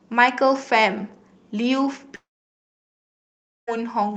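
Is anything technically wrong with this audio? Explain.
Yes. From 2.15 to 3.69 s, the sound smears into a fading buzz and then goes silent for about 1.4 s. It resumes with that stretch lost, likely from a long network dropout.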